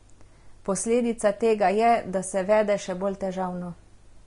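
Throughout the speech, the treble carries the hiss and grain of Vorbis compression, likely at a low quality setting in the region of 34 kbps. Nothing survives above about 10.6 kHz, and the coarsely quantised upper band turns fine detail into noise of similar energy, so tones sound rough and onsets smeared. On a spectrogram the energy stops at a flat ceiling near 10.6 kHz, with blotchy, speckled texture just beneath it.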